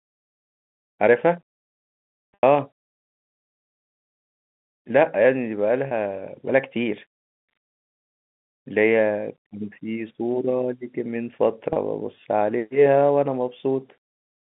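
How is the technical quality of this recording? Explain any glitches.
The recording has three short dropouts, all from packet loss with pitch repetition, heard over a telephone-band line that cuts everything above about 3.6 kHz and carries G.711 coding. At 2.34 s, about 90 ms of sound is missing. That length fits three consecutive lost packets. At 5.88 s and 11.73 s, about 30 ms goes missing each time. The receiver fills each gap by repeating the last pitch cycle. The short gaps sound like a brief, buzzy hold. The longer one starts to fade before the voice returns.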